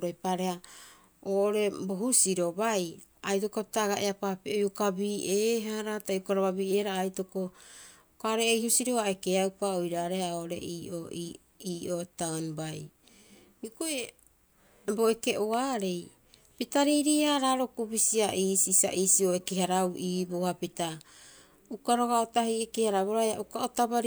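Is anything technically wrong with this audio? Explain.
Yes. An electrical switching spike occurs at 15.53 s in this speech recording: a sharp snap, lasting only a few milliseconds, sits on top of the sound. It peaks at a fairly modest level, somewhere around -30 dBFS. The likely cause is a nearby switch, motor or static discharge arcing briefly, with the audio line picking up that burst of electrical energy as a click.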